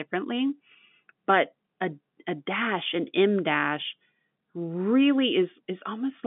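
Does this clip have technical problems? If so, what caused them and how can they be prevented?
No technical faults are audible.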